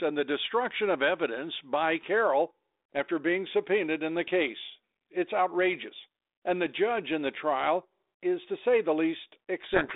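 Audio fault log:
9.64 to 9.96 s: codec payload misread. The speech is abruptly buried in harsh distortion, which continues to the end of the clip. The G.726 decoder takes each code word's bits in the wrong order, so every adaptive prediction update goes astray.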